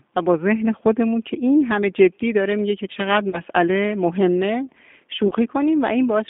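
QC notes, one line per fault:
Throughout: G.729 codec. The audio is confined to roughly 200 Hz to 3.6 kHz and has a plainly audible rough, synthetic texture. This is consistent with 8 kbit/s G.729A, which resynthesises the speech from a vocal tract filter, a pitch predictor and sparse pulses rather than carrying the waveform.
3.30–3.41 s and 5.28–5.33 s: VoIP packet loss concealed by the speech codec. About 30 ms of audio is missing at each point, which fits one lost packet each time. The decoder extends its last pitch and filter with falling gain, so the speech is briefly smeared into a fading tone or noise before recovering.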